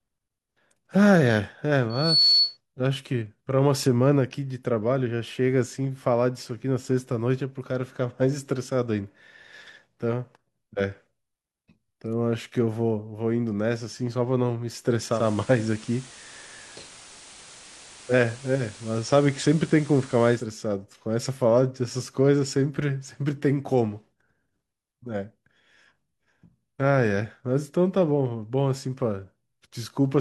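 At 1.90 s a microphone begins picking up the loudspeaker it feeds, and at 4.4 kHz the loop's gain climbs past unity, producing loudspeaker feedback squeal. The tone feeds on itself, swelling over roughly a third of a second into a piercing whistle that ends up some 5 dB louder than the speech. It rings on until 2.57 s, when the squeal stops and the speech carries on beneath.

From 15.11 s to 20.48 s the receiver loses its digital signal and falls back to the FM broadcast of the same station, a digital radio blend to analogue. Each changeover is a cross-fade of about 171 ms. Once on FM, a hiss comes up roughly 20 dB beneath the speech. The level shifts by about 1 dB at the switch, and the sound returns to full digital quality at 20.48 s.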